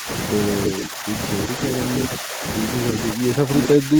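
At the very start, 0.0 to 0.08 s, the speech dips by around 10 dB: speech suppressed in double talk, likely because the echo canceller heard both sides at once and turned the talker down along with the loudspeaker echo. It returns from 0.7 to 1.12 s, then at 1.49 to 1.56 s (a shallower dip of around 5 dB), 2.19 to 2.43 s, 3.13 to 3.5 s and 3.76 to 3.99 s. Unlike echo leak, nothing extra is heard. The speech itself sinks or thins in chunks.

Echo leak appears as short scraps at 0.65 to 0.7 s and 3.62 to 3.68 s. A delayed copy of the speech, arriving about 0.33 s late and about 5 dB below it, comes back, likely because the far end's canceller failed to remove everything its microphone picked up from its loudspeaker. What separates it from double-talk suppression is an added, lagging duplicate rather than lost level.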